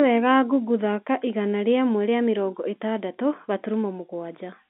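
No technical faults can be heard in this recording.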